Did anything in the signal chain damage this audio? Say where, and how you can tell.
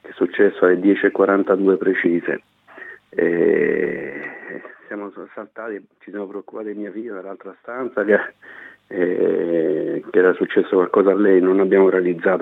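Yes. Zipper noise runs from 3.90 to 5.06 s, where the level falls by roughly 15 dB, and again from 7.73 to 8.12 s as it rises by about the same amount. A fine ticking rides on the sound only while the level moves, at around a hundred steps a second. That points to a gain stage in the driver or buffer processing that updates its gain once per buffer of about 10 ms with no ramp, so each jump leaves a small click.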